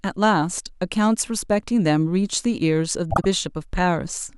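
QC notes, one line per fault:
3.10–3.25 s, frames out of order: two neighbouring 52 ms blocks were decoded swapped, so this speech stretch plays halves reversed, a garbled flutter.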